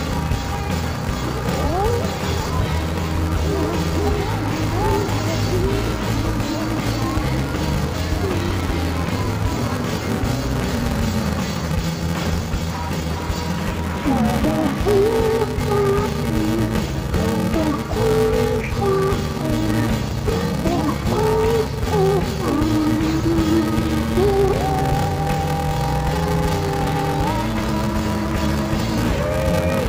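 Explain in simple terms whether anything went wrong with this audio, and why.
Throughout the clip the sound is dull and robotic, with a steady buzz near 345 Hz. This is interleaved audio read as planar: the left and right channels got sorted wrongly in tiny chunks, about 2.9 ms each, which fits 128-sample blocks.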